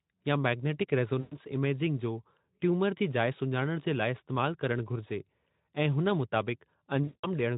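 At 1.19 s, right after "या मैग्नेटिक", the speech smears into a stretched, fading sound until about 1.36 s, and stays thin as "इमेजिंग जो ट्यूमर जी" begins. A longer episode at 7.03 to 7.27 s is likewise stretched and fades. Both are VoIP packet loss concealed by the speech codec, heard through light Speex coding. About 120 ms and then 200 ms of audio went missing, and the decoder stretched its last pitch and filter while lowering the gain.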